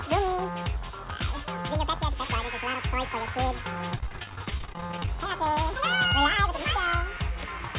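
From 3.9 s to 5.08 s the sound turns choppy, with a rapid run of short holes, none longer than about 30 ms, giving a stuttering texture. This is repeated packet loss. Packets kept failing to arrive in time, and each hole was patched by stretching the last received sound before the next loss hit. Roughly a third of that stretch is concealed rather than real. The narrowband call path, with nothing above 4 kHz, fits a G.711 codec.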